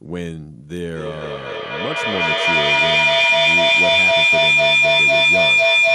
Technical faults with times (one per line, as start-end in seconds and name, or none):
0.82-5.94 feedback howl